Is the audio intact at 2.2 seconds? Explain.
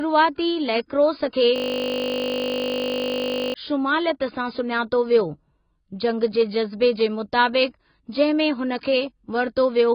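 No. At 2.2 s the speech sits inside a system hang loop running from 1.56 to 3.54 s: the machine froze while the sound hardware kept replaying one 20 ms slice of its buffer, so that fragment repeats about 99 times. The result is a steady 50 Hz buzz replacing about two seconds of speech, rather than the silence of a dropout or the irregular stutter of late buffers. The sound is also dull and smeared, with nothing above about 5.1 kHz and a warbling, fizzy texture, likely from heavy AAC compression at a low bitrate.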